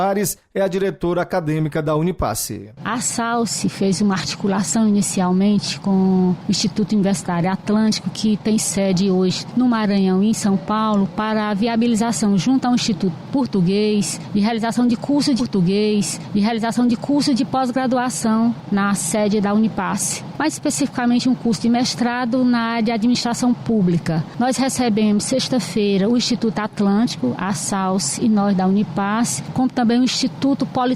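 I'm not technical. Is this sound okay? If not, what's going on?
No. At 15.39 s there's a stream segment repeated: the player loaded the same chunk twice, so two seconds of audio play again after a small blip. Unlike a stutter, which loops a tiny fragment rapidly, this replays one whole, continuous passage.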